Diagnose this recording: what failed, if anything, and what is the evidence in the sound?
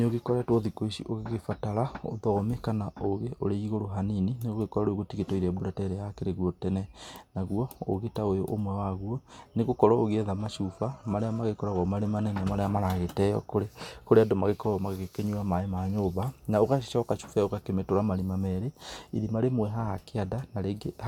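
No audible faults detected.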